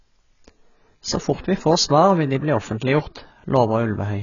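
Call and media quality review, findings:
Speech dull and band-limited throughout, nothing above 7 kHz, sibilants fizzy and smeared, vowels warbling. Likely AAC compression (AAC-LC) at a low bitrate, consistent with about 16 kbps: the encoder drops the top band and coarsely quantises what's left, leaving spectral holes.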